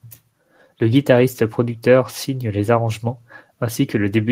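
No technical faults are audible in this speech recording.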